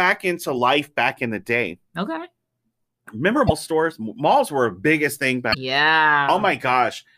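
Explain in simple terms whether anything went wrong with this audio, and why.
Damaged data in a compressed stream: a few stretches of the compressed speech were corrupted, so the decoder misread them and had to resync. Each leaves a short glitch, at 0.54–0.58 s (before "back in the day"), 3.46–3.51 s (before "stores malls were a") and 5.50–5.55 s (after "were a biggest thing").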